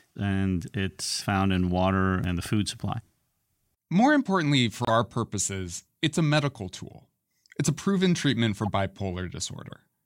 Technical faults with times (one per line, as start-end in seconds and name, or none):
1.74-1.79 corrupt frame decoded
4.85-4.91 corrupt frame muted
6.37-6.44 corrupt frame decoded
8.62-8.67 corrupt frame decoded
9.70 corrupt frame decoded